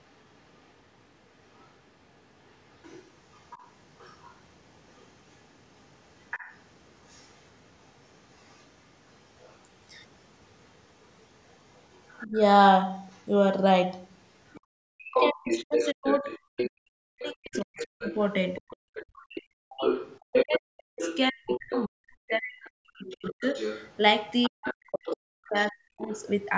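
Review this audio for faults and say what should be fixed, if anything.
The other side's voice leaking through runs from 0.0 to 13.27 s as a faint second talker, about 30 dB under the main speech. From 14.47 to 26.25 s it becomes nearly as loud as the talker. The cause is likely a loudspeaker echo that the canceller did not fully remove. It differs from crosstalk or a second person in the room because it is the far side's own voice coming back from the loudspeaker into the microphone. Prevention: give the echo canceller a clean loudspeaker reference and enough tail length, or have the talker use a headset.

Speech suppressed in double talk shows first as a brief dip of about 20 dB between 12.25 and 12.38 s. From 14.57 to 23.45 s the drops go to about 40 dB and add up to roughly 5 s. From 24.48 to 26.1 s there is about a second and a half more. The likely cause is the canceller attenuating everything while both sides talked. 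Unlike packet loss or dropouts, the cuts line up with the leaked voice rather than falling at random. Prevention: tune the double-talk detector so that near-end speech is kept while the far end is active.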